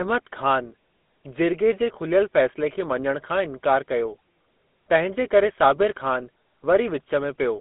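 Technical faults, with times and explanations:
Throughout, GSM full-rate codec: a buzzy, gravelly roughness from pulse-excited vocal-tract modelling, which fits roughly 13 kbps. On a spectrogram, energy is confined to about 200 Hz–3.6 kHz, empty above 3.8 kHz.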